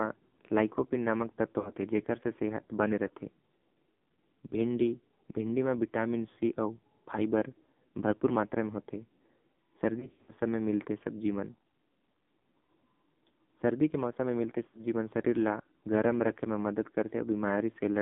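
Throughout, the speech carries the AMR narrowband mobile codec. The band is confined to roughly 150 Hz to 3.5 kHz, and the heavily buzzy, synthetic timbre fits a low AMR-NB mode near 5.9 kbps. Unlike plain low-pass filtering, the voice itself sounds modelled and rough, not just dulled.

Lost AMR speech frames then interrupt it three times. At 1.60–1.71 s, about 40 ms of speech is missing, heard as a brief dip and warble. From 9.99 to 10.33 s, gaps totalling about 180 ms are scattered across 280 ms, with the longest run about 80 ms. The sound stretches, fades and returns rough. At 14.68–14.84 s, about 60 ms drops. Unlike clean dropouts to silence, the decoder smears the last pitch forward with decaying gain.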